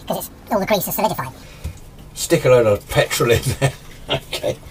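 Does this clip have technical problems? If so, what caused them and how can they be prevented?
Yes. A section at the wrong speed runs from 0.0 to 1.43 s, where the sound plays about 1.78 times too fast, so it is both hurried and raised by roughly ten semitones before dropping back to its natural pace and pitch. Because speed and pitch shift together, the likely cause is a resampling or clock mismatch in an editor or player. Checking that every segment's sample rate matches the project rate before export prevents it.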